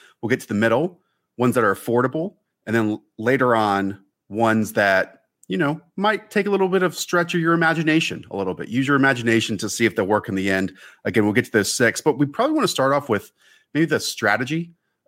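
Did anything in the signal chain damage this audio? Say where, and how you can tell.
No, nothing in the signal chain damaged this audio.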